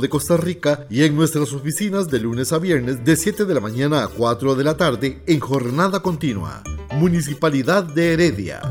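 A sudden voltage step, likely from a switch, plug or static discharge, enters the signal from 5.54 to 5.56 s as a single loud pop, well above the surrounding sound, which continues underneath.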